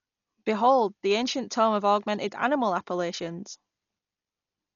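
A speech clip, dull and rough throughout, with nothing above 7 kHz and noisy fill between harmonics on a spectrogram, likely Dolby Digital compression at a bitrate near 40 kbps.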